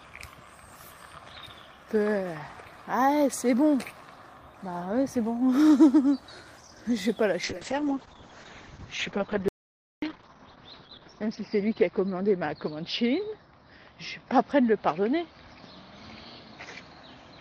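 At 7.44 s there's a call bitrate drop that lasts to the end. The bandwidth estimate collapses and the encoder goes from 48 kbps down to 7 kbps. The top end shrinks from 20 kHz to about 6 kHz, and the sound turns muffled and watery, bottoming out for about 3.8 s.

From 9.48 to 10.02 s there's an audio dropout to silence, a gap of about 540 ms of silence with no room tone at all. The input was likely lost briefly, through a disconnect or stray mute, while recording carried on.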